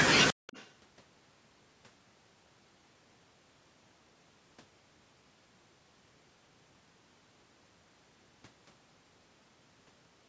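From 0.34 to 0.47 s, the echo canceller clamps the microphone while the far end plays, so the background gated by the echo canceller dips by about 40 dB, briefly going near-silent. From 0.47 to 0.71 s, an echo leak is likely behind a faint copy of the speech arriving 126 ms late, well below the main speech.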